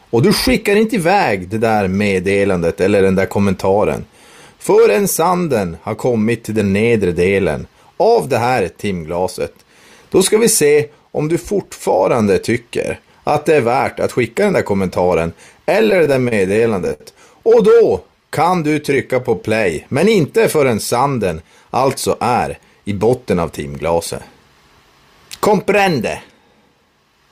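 Around 15.90 to 17.01 s the audio hits repeated stalls (stutter): thirteen short gaps, the longest 67 ms, where packets arrived late and the jitter buffer kept running dry, so the receiver stretched the last sound to cover about 204 ms while nothing actually went missing. Right after, from 18.04 to 19.36 s, there's a jitter buffer slow-down: playback drops to 91% speed at unchanged pitch while the receiver repeats pitch periods to rebuild its reserve, adding 126 ms and drawing sounds out. Then the opposite happens twice as jitter buffer speed-up, 21.33 to 21.80 s at 107% and 22.23 to 22.91 s at 109%. The buffer had overfilled, and trimming roughly 40 ms and then roughly 70 ms of pitch periods makes those stretches sound hurried.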